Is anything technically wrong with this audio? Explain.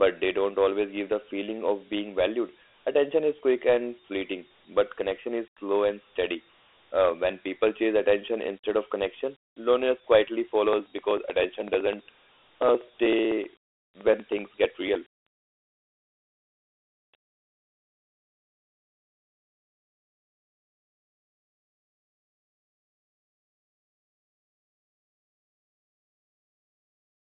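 Yes, Dialogic VOX ADPCM coding runs throughout the speech. Each sample is stored as a coarse 4-bit step in a narrow 300 Hz to 3.4 kHz phone band, which fits a 32 kbps stream. Nothing is left above 3.8 kHz, so the sound is muffled, with a plainly audible gritty hiss tracking the speech.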